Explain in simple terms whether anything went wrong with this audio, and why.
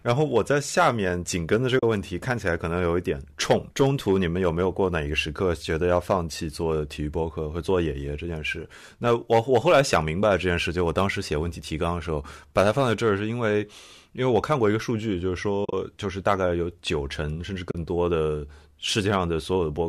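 AAC frame loss with muting occurs three times in this speech, at 1.79 to 1.83 s, 15.65 to 15.73 s and 17.71 to 17.75 s. Small chunks of the compressed audio went missing, and the decoder filled each gap with silence. The first and last gaps are each about 40 ms. The middle one loses about 70 ms spread over 80 ms, with its longest gap roughly 40 ms. The decoder's overlapping blocks fade the sound out and back in, so each gap is a brief soft dropout. The audio was likely carried by the low-delay AAC used in video calls, which leaves only light damage.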